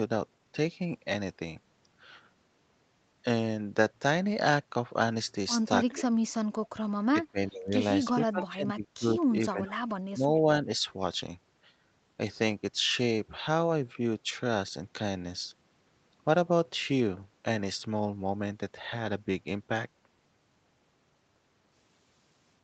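When both ends of the call talk at once, the echo canceller likely cannot tell this talker apart from its own loudspeaker echo, so it turns everything down. That speech suppressed in double talk shows up as dips and gaps: 5.93–6.43 s (down roughly 35 dB), 7.31–7.73 s (around 20 dB), 8.31–9.18 s (around 20 dB), 9.41–9.88 s (around 25 dB), 10.13–10.28 s (around 15 dB), and a slight sag at 10.64–10.69 s.

Inside two of those dips, the same canceller likely lets some loudspeaker sound slip back. This echo leak appears at 8.40–8.45 s and 9.66–9.71 s as brief delayed copies of the speech, trailing by 418 ms. The first is about 15 dB below the speech and the second about 25 dB below, so they come through as faint, brief scraps.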